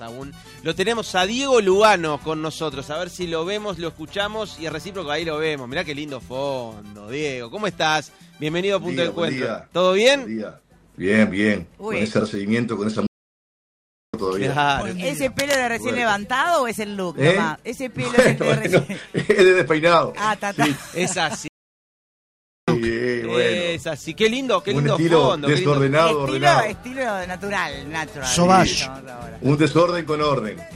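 A 31-second audio clip with two playback stalls and one burst of cable scratch noise. At 13.07 s the output drops to silence for about 1.07 s before resuming at 14.14 s, and at 21.48 s it cuts out again for about 1.2 s until 22.68 s. Each gap breaks the sound in mid-flow, the pattern of a playback stall, likely caused by the player starving for data or its audio thread being blocked long enough to stop feeding the output. At 15.39 s a dense, ragged rasp sits over the sound for about 0.17 s, ending at 15.55 s, only a little quieter than the programme itself. That is cable scratch noise, likely from a worn cable, connector or control being moved so that its contact resistance jumps rapidly and injects irregular noise bursts into the signal.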